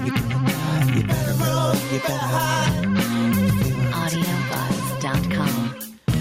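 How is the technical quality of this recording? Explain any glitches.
The recording suffers from gain pumping throughout. The level ducks by around ten decibels under each loud sound, squashing the dynamics, likely from excessive input gain meeting a fast limiter. Unlike a noise gate, the sound is not cut to silence between loud sounds.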